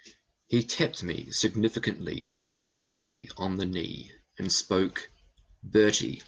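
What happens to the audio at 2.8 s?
Packets were likely held up in transit and the jitter buffer ran dry, causing a call audio freeze from 2.19 to 3.25 s. A brief trace of the last sound gives way to about a second of silence. The speech then resumes with "on the knee and", delayed but with nothing missing.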